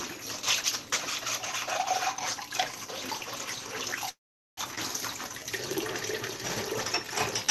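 At 4.09 s a call audio freeze begins. Packets were likely held up in transit, so the jitter buffer ran dry and the receiver had to invent sound to cover the wait. It extends the last moment briefly as a fading buzz or hiss, then falls to silence for roughly 0.42 s. Audio resumes at 4.60 s from exactly where it stopped, so about half a second of gap has been inserted without losing anything.

Shortly afterwards, from 4.75 to 4.80 s, comes a skip ahead. A stretch of audio was dropped, either in transit or by the overflowing jitter buffer, while later audio was already waiting. Roughly a third of a second of sound is gone, and the material on either side is joined with almost no pause. The result is an abrupt jump forward rather than a dropout. Throughout, the Opus call path stops the high end at about 12 kHz.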